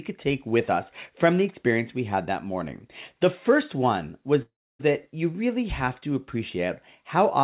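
Packets were likely held up and the jitter buffer ran dry, causing a call audio freeze from 4.42 to 4.81 s after "first one was". A brief fading fill gives way to about 0.29 s of silence, then "that you really have" resumes with nothing lost.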